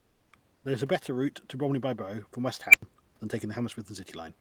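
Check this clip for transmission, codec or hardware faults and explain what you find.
One fault is present: comfort noise in place of the background, from 0.00 to 0.27 s and from 0.55 to 0.63 s. Sending likely paused under Opus DTX, and the receiver filled both gaps with steady synthetic noise, about 2 and about 3 dB quieter than the room noise. Unlike a dropout, the pauses never fall silent. The background turns smooth and featureless instead.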